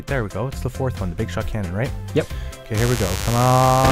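At 2.77 s a mains buzz starts and runs to the end at 3.92 s. Interference from 50 Hz mains wiring, such as a dimmer, rectifier or poor shielding, gets into the audio as sharp switching spikes twice per cycle. It sits roughly 10 dB below the signal and sounds like a steady, raspy buzz. A spectrogram shows a stack of horizontal lines at 50 Hz multiples reaching into the kHz range, and the waveform shows spikes every 10 ms.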